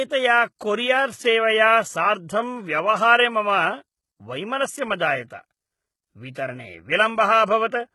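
Speech runs throughout with heavy codec damage, most likely from HE-AAC compression. The sibilants sound gritty and metallic, as if the upper band were a pasted copy of the lower one rather than the real treble. That fits spectral band replication at a very low bitrate, around 16 kbps, where harmonics above the crossover no longer line up with those below. On a spectrogram the upper region shows repeated, blocky patches mirroring lower bands, and there is a hard ceiling with nothing above 11.8 kHz. A brief pre-echo occurs from 6.33 to 6.36 s: for about 27 ms a short hiss leads into a sharp attack, which arrives softened and smeared. The codec spread its quantisation noise across the whole transform block, so noise sized for the loud onset also fills the quiet stretch before it. A spectrogram shows this as a thin broadband haze just ahead of the transient, and the waveform shows low-level fuzz before the attack.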